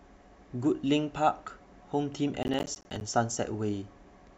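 Processor overload crackle runs from 2.43 to 3.01 s, a little over half a second of gritty tearing laid across the speech. The machine was falling behind on its audio work, missing one short buffer deadline after another. Each miss dropped a sliver of silence, apparently around 10 ms long, into the stream, with hard edges on both sides. Some twenty of these gaps in quick succession blur into crackle, which stops once the load eases.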